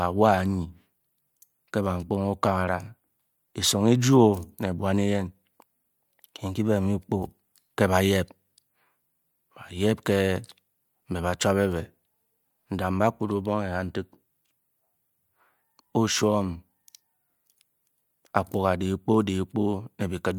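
No technical faults occur anywhere in the recording, so there is nothing to place in time order.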